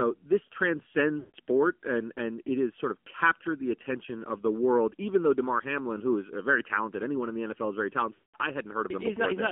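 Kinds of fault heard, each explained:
AMR narrowband mobile codec: speech squeezed to about 7.4 kbps, band-limited near 250 Hz to 3.7 kHz, buzzy and synthetic; spectrogram shows nothing above 3.7 kHz.
Lost AMR speech frames: decoder repeats old settings with fading gain, smearing then silencing the speech around 1.2 s before "and and it has" and around 8.14 s after "is very"; waveform shows decaying gaps.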